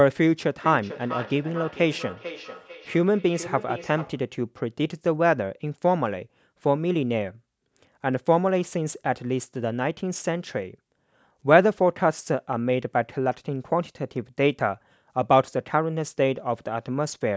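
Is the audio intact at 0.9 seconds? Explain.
No. At 0.9 seconds the speech carries a feedback echo between two devices, running from 0.6 to 4.32 seconds. Two devices on the same call share a room. One plays what the other's microphone sent, and that microphone picks it up again. Each echo canceller only removes its own device's playback, so the sound loops. The speech returns at a fixed interval of roughly 0.4 seconds, thinner and ringing, at its loudest about 14 dB below the speech.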